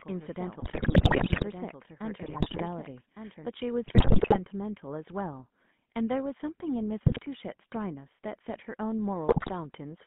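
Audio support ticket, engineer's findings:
GSM full-rate codec across the whole clip. Speech has a buzzy, gravelly roughness, plainly audible. Consistent with GSM full rate at about 13 kbps: vocal-tract filter driven by regular pulse excitation, coarse excitation coding. Line band 150 Hz to 3.5 kHz. Spectrogram: hard ceiling at 3.5 kHz, empty above, little below 150 Hz, harmonics smeared and grainy rather than clean striations. Waveform: no clipping, but a rough, jagged fine structure.

GSM bit errors in five bursts: 0.6–1.44 s, 2.22–2.63 s, 3.86–4.39 s, 7.06–7.27 s, 9.28–9.50 s. Symptoms are squawks, pops and gargling, worst in the first burst and at 9.3 s. The damage is in the decoder, from corrupted filter, pitch and gain parameters. Each bad frame bends the spectrum or jumps in level. Spectrogram: blocky vertical bands with abrupt spectral shape changes frame to frame. Waveform: sudden amplitude spikes and discontinuities within each window.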